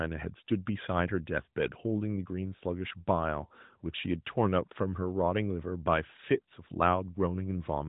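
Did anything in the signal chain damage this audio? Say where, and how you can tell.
No, nothing in this speech recording stood out on listening as damage introduced anywhere along the signal chain.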